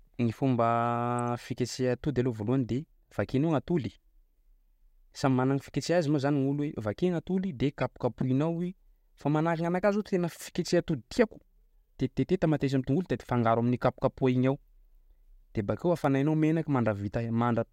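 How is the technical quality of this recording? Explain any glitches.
The speech recording has three brief glitches: two damaged compressed frames and one tiny dropout.

Corrupt frame decoded at 1.19 s and 7.81 to 7.83 s: flipped bits in a few frames, then about one, misplaced energy across frequencies, giving short chirpy blips.

Block of digital silence at 16.04 s, just after "de bakeo": a 0.73 ms run of zeros, which fits a 32-sample buffer left unfilled, cuts abruptly in and out, heard as a tick.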